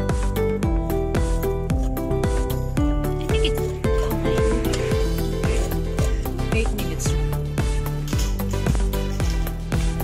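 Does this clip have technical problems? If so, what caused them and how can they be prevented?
Yes. There are two loud pops. The first is a single sharp pop from 1.15 to 1.17 s, peaking about 10 dB above the audio. The second, from 8.70 to 8.78 s, is a double pop, about 15 dB above. The sound continues underneath both. The likely cause is a brief voltage spike from a plug, switch, static discharge or driver glitch, shaped by the downstream circuits. Secure connections, avoid switching during recording, and ground the equipment properly.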